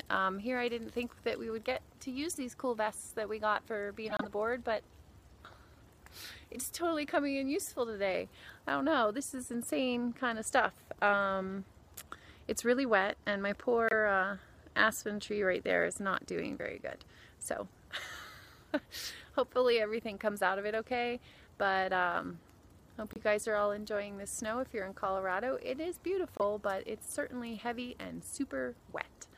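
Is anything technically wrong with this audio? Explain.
Yes. Each of these four short bursts is a corrupt frame decoded: damaged bits in compressed frames were played instead of being concealed, so misread gains and codes put energy at the wrong frequencies. This happens at 4.06–4.25 s (several frames, peaking about −20 dBFS), 13.88–13.93 s and 26.37–26.42 s (a couple of frames each, about −15 dBFS), and 23.07–23.18 s (a few frames, about −30 dBFS). Each is heard as a brief chirp or burst of noise.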